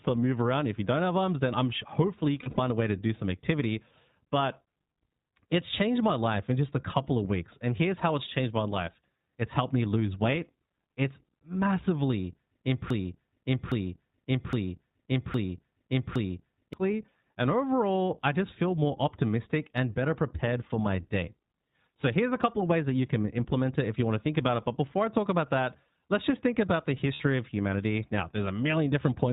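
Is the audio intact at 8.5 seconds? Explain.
No. At 8.5 seconds the speech carries iLBC codec damage, present through the whole clip. Each 20 ms frame is coded independently, so the speech sounds rough and synthetic and nothing above 4 kHz survives. A spectrogram shows a hard ceiling at 4 kHz.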